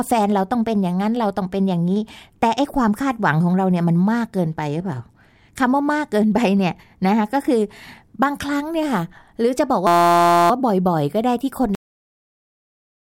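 System hang loop from 9.87 s to 10.50 s: the host or driver stalled while the sound hardware kept replaying the same small stretch of its ring buffer. Each pass is 5.8 ms, which fits a 256-sample buffer, so the slice repeats over a hundred times at 172 Hz. Because the loop is so short, the speech collapses into a steady, pitched buzz at that rate. Almost no audio seems to be lost once it clears.

Cut-off end at 11.75 s: the final buffers were never written out, so the speech stops abruptly partway through a sound rather than fading or finishing naturally. There is no decay or room tail. The signal drops straight to digital silence, and that dead silence runs from 11.75 s until the clip ends.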